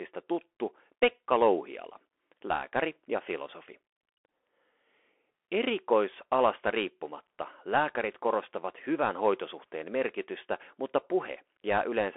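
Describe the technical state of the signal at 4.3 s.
At 4.3 s, as across the whole clip, the Bluetooth CVSD headset codec's one-bit slope coding yields scratchy sibilants and granular hiss; a spectrogram shows a hard ceiling near 3.8 kHz, above a narrow telephone band.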